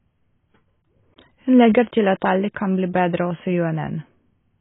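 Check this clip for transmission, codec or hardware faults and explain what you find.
There is one fault, present for the whole clip: heavy AAC compression. The encoder, likely AAC-LC, was given far too few bits, around 16 kbps judging by the damage, so it discarded everything above 3.8 kHz and coarsely quantised what remained against its hearing model. The speech therefore sounds dull and muffled, with sibilants blurred and a watery, warbling texture smearing the sustained sounds from start to finish.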